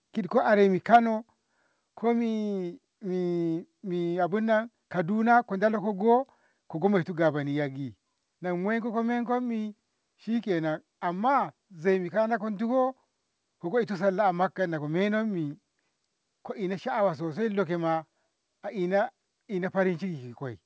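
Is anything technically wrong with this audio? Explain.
Yes. There are two related faults right after "kid ko aremi", near the start of the speech.

Microphone overload, 0.94 to 0.96 s: For about 20 ms the peaks flatten against the converter's ceiling, with roughly 15 percent of samples clipped and the signal pushing about 3 dB past full scale. The likely cause is a microphone input level set too high, so the tops of the loudest waveform cycles are squared off. That adds a brief harsh, crackling edge to the syllable.

Microphone volume stepped down, at 0.96 s: Immediately after the clipped peak, the level of the voice and the background drops by about 3 dB in one step rather than a smooth fade. This sounds like the call software reacting to the overload by lowering the device's input volume. From that point the speech sits about 3 dB quieter, and the drop is audible as a sudden step just after the distortion.

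The audio is band-limited at 8 kHz, which fits the wideband coding of the call path.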